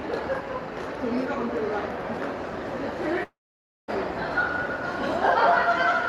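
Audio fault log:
3.23–3.90 s, long network dropout: the sound smears into a fading buzz that sinks to near silence for about 0.55 s, then resumes with roughly 0.6 s of material gone and the timing shifted by around 50 ms. The likely cause is a run of lost packets on the call path. The receiver stretches the last audio it had, gives up, then picks up again further on, all within the 12 kHz band the Opus codec carries.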